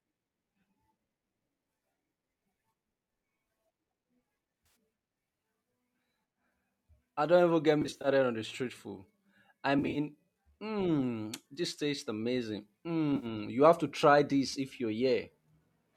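AAC frame loss with concealment appears four times: at 4.66–4.76 s; at 7.82–8.08 s, between "I don't even get" and "on the street food"; at 9.79–9.98 s, after "the street food I"; and at 13.16–13.26 s, between "mmm this tastes amazing" and "you have to try". Each is a cluster of short gaps, losing 60 to 140 ms in total, and in the first three none runs much past 30 to 40 ms. The decoder fills each gap from the last good spectrum, so instead of silence there is a brief smeared, phasey, noisy blur. The frames are short, about 10 ms each, likely from low-delay AAC.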